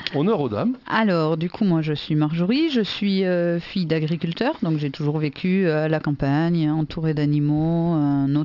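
Aliasing runs throughout: the rate was cut without an anti-alias filter, folding content above 6 kHz back into wrong, gritty tones around 30 dB down, consistent with a 48 kHz to 12 kHz conversion.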